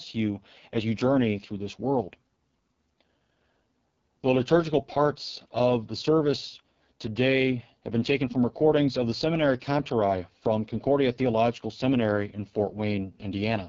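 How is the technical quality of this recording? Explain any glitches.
The technical quality is poor, with heavy codec damage throughout. The whole clip carries AMR wideband (HD Voice) codec artefacts. The speech is rough and raspy, which fits AMR-WB at its lowest rate, 6.6 kbit/s. The codec models the vocal tract and drives it with sparse pulses. At this rate that leaves grainy, buzzy speech. Nothing is heard above 7.3 kHz. The top band is only shaped noise.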